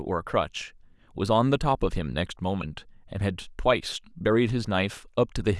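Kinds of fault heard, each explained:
No technical faults can be heard anywhere in the recording; the signal stays intact and continuous, with no dropouts, distortion or interference.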